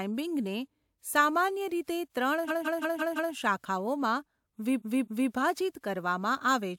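Twice a run of compressed frames was sent more than once, so the decoder replayed the same stretch of speech. From 2.47 to 3.33 s, repeated frames loop a 170.7 ms block five extra times, adding 853 ms as a rapid stutter. From 4.78 to 5.29 s, a 256 ms block plays twice more, adding 512 ms as a slower double repeat.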